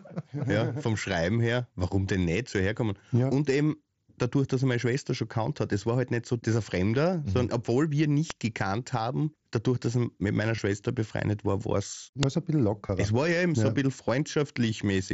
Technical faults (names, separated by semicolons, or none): uninitialised buffer; concealed Bluetooth headset packet loss